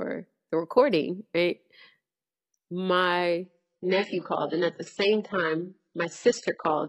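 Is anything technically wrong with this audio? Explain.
Yes. From 3.45 s to the end, the speech drops to a lower bitrate on an adaptive stream. The connection likely slowed, so the player switched to a cheaper version of the stream. The switch is sudden and leaves no gap. Nothing above 8 kHz remains, so the treble turns dull. Codec artefacts rise. The sound points to a shift from a clean AAC stream to a very low-rate HE-AAC one.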